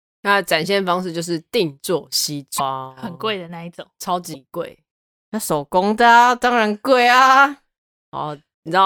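Speech, with two short disruptions at 2.58 to 2.60 s and 4.33 to 4.36 s, each about one 26.1 ms frame long, where the audio skips ahead. The likely cause is a broken MP3 bit reservoir: frames were lost, so the following frame reads borrowed bytes belonging to another frame. Separately, from 3.06 to 4.88 s the level drops by about 4 dB, with speech and background noise falling and recovering together, abruptly rather than ramped, most likely a sudden gain jump from a gain step applied without smoothing.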